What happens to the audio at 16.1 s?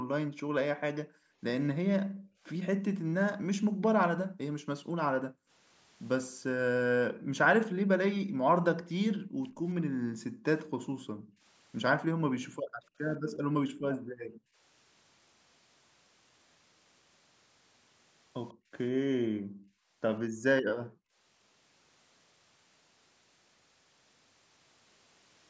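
At 16.1 s the speech carries on intact, with nothing breaking into it beyond the ordinary trimming of the lowest bass and the 8 kHz top end that the call microphone processing gives the whole recording.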